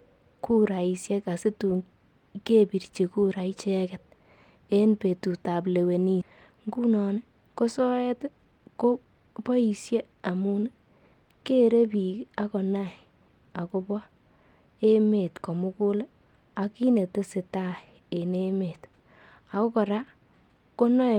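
At 6.21 to 6.23 s, a skip ahead drops roughly 0.7 s of speech. The sides join directly with no silence, which is how it differs from a dropout that leaves a gap.

A jitter buffer speed-up follows from 6.30 to 7.18 s at 112% speed, trimming about a tenth of a second. A second runs from 8.06 to 9.35 s at 115%, trimming about two tenths. The buffer was draining excess delay by removing pitch periods. The speech sounds hurried while keeping its pitch, which a resampling speed change would not.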